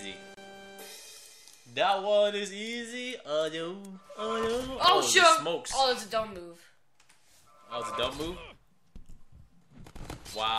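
At 0.34 s the sound drops out for about 29 ms and resumes at 0.37 s. This is a gap at a join of encoded pieces. Two sections were encoded on their own and butted together untrimmed. The encoder's start-up delay and the padding of its final frame both stayed in. The result is a brief hole of silence with smeared edges. The sound then picks up exactly where it broke off.

From 4.74 s to 5.00 s a short burst of crackle rides on the sound. This is processor overload crackle. The processor fell behind and missed a run of audio buffer deadlines in a row. Each missed buffer went out as silence. Each dropout is tiny, which points to buffers of well under a millisecond. The burst suggests around ten misses. Together they sound like a gritty tearing that stops once the load eases.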